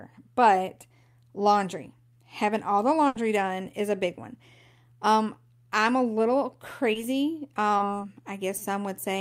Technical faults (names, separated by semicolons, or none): burst of packet loss; short concealed packet loss